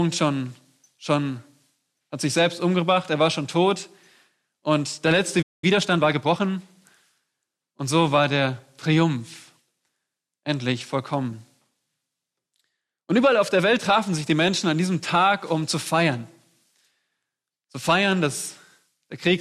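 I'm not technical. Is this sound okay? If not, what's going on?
No. At 5.42 seconds there's a playback stall: the sound cuts out for about 0.2 seconds, likely because the player briefly ran short of data, unlike a click or glitch. From 5.64 to 6.44 seconds comes time-compressed catch-up: the sound runs about 1.25 times fast to recover lost time, with unchanged pitch, unlike a sped-up recording.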